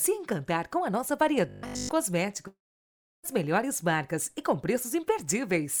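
From 1.49 to 1.89 s, robotic sound from repeated short buffers turns the audio into a rigid 50 Hz buzz, likely from one 20 ms buffer replayed continuously, showing as evenly spaced harmonic stripes. Between 2.47 and 3.26 s, a long network dropout likely loses about 760 ms: a brief fading continuation of the last sound, then about 660 ms of flat, near-empty waveform.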